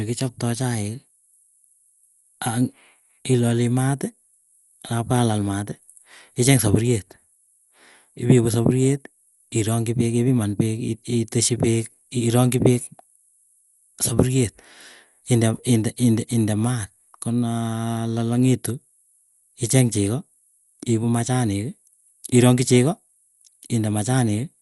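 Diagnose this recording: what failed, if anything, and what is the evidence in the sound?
The codec stage failed: throughout the speech nothing sounds above about 11.5 kHz, and a rough, fluttering noise clings to voiced tones. This is likely Dolby Digital compression at a low bitrate near 64 kbps, starving lines of mantissa bits and filling them with dither, unlike a clean low-pass filter.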